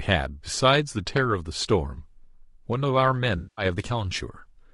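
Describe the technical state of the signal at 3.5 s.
At 3.5 s the signal is inside an AAC frame loss with concealment, running from 3.37 to 3.65 s. The decoder is rebuilding missing audio from the last good spectrum, so the sound turns smeared and noisy rather than dropping to silence. A hard dropout would leave a gap instead, and the gap here points to about ten frames, roughly 200 ms, going missing.

Underneath, low-delay AAC compression is plainly audible throughout. The sound is rough and grainy, with noise filling the spaces between harmonics and a dulled, synthetic-sounding top band. This is likely AAC-ELD, and the damage fits a bitrate of about 32 kbps.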